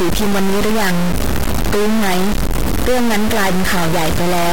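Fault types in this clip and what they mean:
Stuck bit: one converter bit is likely jammed at a fixed value for the whole clip, so about half the samples are pushed off by a large step, roughly a third of full scale. The speech turns harsh and buzzy, and pauses fill with loud noise.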